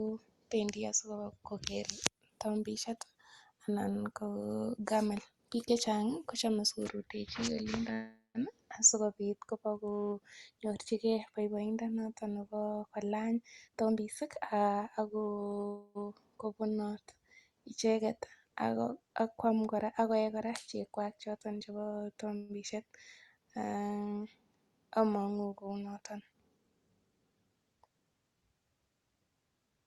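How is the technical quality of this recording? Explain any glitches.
The speech has two kinds of transport glitch, heard over audio that sounds like it passed through a call codec, with the top end stopping around 12 kHz.

Call audio freezes occur at 7.93–8.38 s, 15.67–15.98 s, and 22.37–22.52 s, the last just after "cheek kwach choton chebo". Packets were likely held up and the jitter buffer ran dry, so the receiver stretched the last sound into a fading buzz or hiss. That fill lasts about 0.41 s, 0.28 s and 0.12 s. The first freeze decays to about 160 ms of silence and the second to about 40 ms. The speech then resumes where it stopped, with nothing lost.

Jitter buffer speed-ups run at 13.22–15.43 s and 25.68–26.71 s. The buffer had more audio than it needed, so it trimmed pitch-period-sized slices in succession. Pitch stays the same, but the speech hurries to 119%, shedding roughly 0.4 s, and then to 109%, shedding about 0.1 s.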